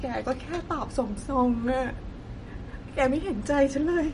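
From start to finish, the likely cause is MP3 compression starved of bits, which fits a rate near 40 kbps. The encoder discards everything above 10.6 kHz and lets weak frequency lines flicker between frames, so the speech sounds dull, watery and swirling, with smeared attacks.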